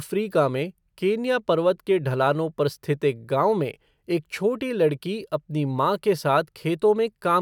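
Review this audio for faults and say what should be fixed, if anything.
No faults can be heard anywhere in the speech, so nothing needs fixing. With nothing to correct, there is no preventive step to recommend.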